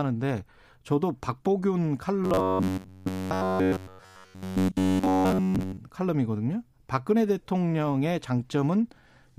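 From 2.24 to 5.77 s the speech goes robotic, the classic sound of repeated short buffers: likely, fresh audio kept arriving late, so roughly 10.7 ms chunks got looped throughout instead of real signal. That imposes a rigid metallic buzz near 94 Hz that only loosely tracks the words.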